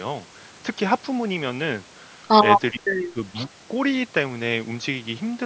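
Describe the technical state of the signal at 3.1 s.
At 3.1 s the speech is being suppressed in double talk. Between 2.72 and 3.52 s it dips and breaks up, falling by roughly 30 dB at its deepest. The likely cause is an echo canceller mistaking the talker for loudspeaker echo while both sides spoke.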